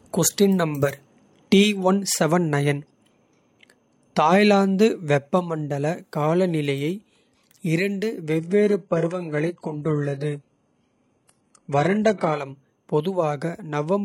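From 8.39 to 12.39 s, speech suddenly dulls and smears, losing everything above 11.5 kHz with no gap: an adaptive stream at a lower bitrate.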